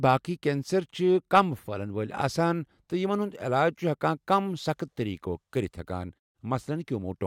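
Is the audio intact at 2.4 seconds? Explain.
Yes, the audio is intact at 2.4 seconds, with no fault present at that moment.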